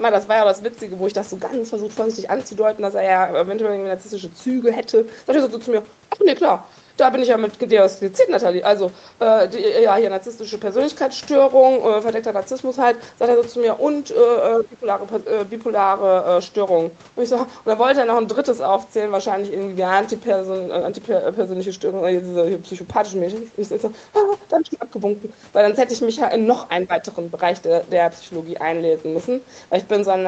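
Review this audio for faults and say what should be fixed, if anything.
The echo canceller most likely took the near talker for loudspeaker echo while both ends spoke at once, so it applied suppression to the speech itself: speech suppressed in double talk. The talker's level sinks by about 15 dB from 14.56 to 14.85 s, roughly 0.3 s of audio pushed down, and again more briefly from 26.87 to 26.92 s, where the speech dips for about 50 ms. To prevent it, tune the canceller's double-talk detection so that it keeps near-end speech at full level whenever both sides are active.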